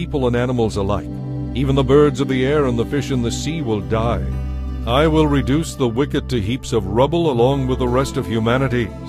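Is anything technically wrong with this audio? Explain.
No, nothing technically wrong stands out here; it all sounds just as it should.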